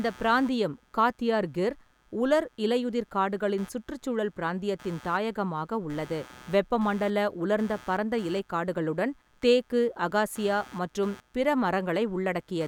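Changing load on the computer's processor, graphics card or mouse is shifting the ground that the audio circuit shares with them, and this computer activity noise runs through the whole speech recording. It comes through as a buzzy, scratchy chirping pulsing at something near 150 times a second, sitting roughly 25 dB under the speech. It rises and falls with what the machine is doing rather than with the talking.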